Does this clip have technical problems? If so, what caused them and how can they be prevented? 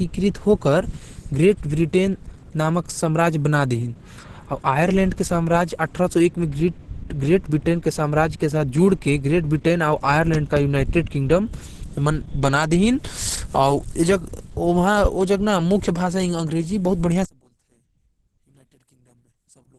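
Yes. Throughout, the speech is muffled and hoarse, and nothing is heard above 12.1 kHz. This heavy damage is likely from Opus compression in its hybrid speech mode, pointing to a rate around 12 kbps. Prevent it by encoding at a higher bitrate.

From 17.25 s to the end, the sound drops by about 34 dB and nearly vanishes. The likely cause is one channel inverted: content shared by both channels cancels when summed to mono. Prevent it by checking polarity before any mono fold-down.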